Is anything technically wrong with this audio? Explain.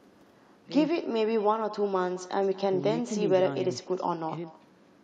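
Yes. Echo with no canceller runs throughout the speech. The far end's loudspeaker feeds its own microphone and nothing removes that pickup, so the talker returns after the round trip, roughly a fifth of a second late and about 20 dB down, as a faint, thin shadow of each phrase.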